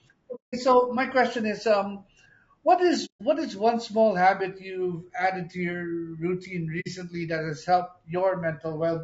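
A codec running with very short frames, likely low-delay AAC compression of the AAC-ELD kind, resolves pitch harmonics poorly at what sounds like a bitrate near 32 kbps. The speech throughout sounds plainly rough and grainy, with noise filling the gaps between harmonics.

AAC frame loss with muting occurs three times: from 0.35 to 0.54 s, 3.05 to 3.21 s, and 6.80 to 6.88 s. The decoder zeroed the lost frames, leaving soft-edged silent holes of about 180, 150 and 60 ms that fade out and back in.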